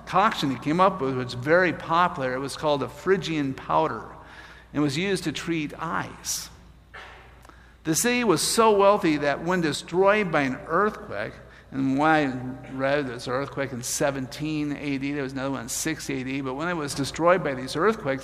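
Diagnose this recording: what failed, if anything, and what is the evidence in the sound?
Sudden gain jumps: sound and noise drop together by about 6 dB at 9.75–9.94 s, then rise about 5 dB at 16.90–17.18 s, likely from unramped digital gain steps in processing.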